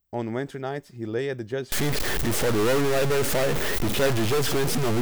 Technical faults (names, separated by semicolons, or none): stuck bit